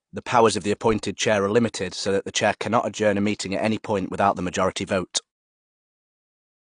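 AAC compression runs throughout the speech: the dull, smeared tone and warbling, fizzy sibilants likely come from AAC-LC at a low bitrate, around 32 kbps, discarding and substituting high bands. The damage persists into the smooth fade-out near the end.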